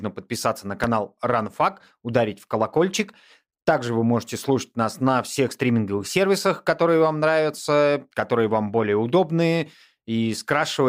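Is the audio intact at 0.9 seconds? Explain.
No. A loud pop hits from 0.84 to 0.87 s. It is a single sharp burst, about 10 dB above the speech. The speech continues beneath it. The likely cause is a sudden voltage spike, such as static or a switch, added to the signal.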